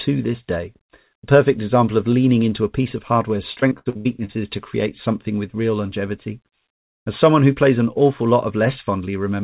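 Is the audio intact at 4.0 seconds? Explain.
No. At 4.0 seconds the speech sits inside a choppy, robotic stretch running from 3.52 to 4.31 s, with pieces of sound dropping out. This is repeated packet loss. Short gaps, the longest about 80 ms, follow one another closely, and each is patched by stretching the last received sound, so roughly 40% of that span is synthetic fill. The narrow, telephone-band tone stopping at 4 kHz is present throughout.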